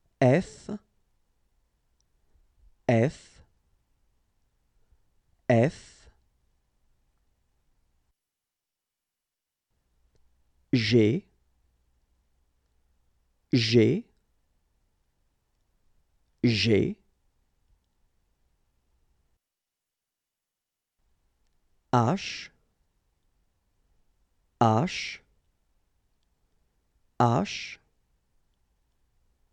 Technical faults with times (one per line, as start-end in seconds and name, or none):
none